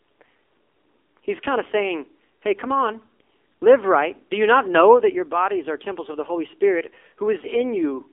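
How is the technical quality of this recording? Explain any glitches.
Quality is held back by one fault that runs the whole way through: the AMR narrowband mobile codec. The speech sits in a phone-line band of about 300 Hz to 3.4 kHz, with nothing above 3.5 kHz, because the codec samples at 8 kHz and rebuilds the voice from a vocal tract model fed by a handful of pulses every 5 ms. The damage is plainly audible as a buzzy, synthetic quality, which fits a low rate of around 7.4 kbps.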